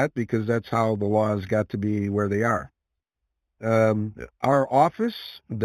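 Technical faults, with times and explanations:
Throughout, imaging from linear upsampling: the rate was raised by joining neighbouring samples with straight lines, and the band edge at 4 kHz points to a conversion from 8 kHz to 48 kHz. That crude interpolation filters poorly, so the top of the speech band sounds dulled while a mirrored copy of the spectrum leaks into the 4 kHz to 8 kHz region, roughly 30 dB below the signal, adding a faint metallic shimmer to sibilants.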